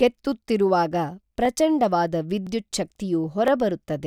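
Speech with overlapping chunks: a 12 ms segment repeats at each one-second join, giving short clicks or stutters at 0.44, 1.45, 2.47 and 3.48 s.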